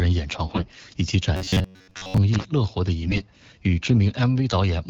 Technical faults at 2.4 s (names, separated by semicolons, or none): loose connector crackle